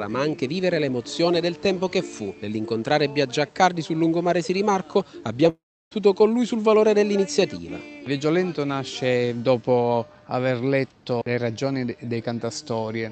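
From 5.49 to 5.93 s the sound smears into a fading buzz, then about 0.32 s of near-silence, likely a long network dropout losing roughly 0.42 s.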